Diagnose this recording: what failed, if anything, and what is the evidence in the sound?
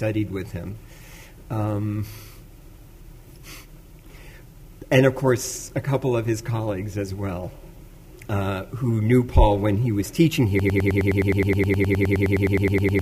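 From 10.6 s to the end, one 0.10 s fragment repeats exactly 23 times, a broken-record loop, likely a stalled playback buffer resending it.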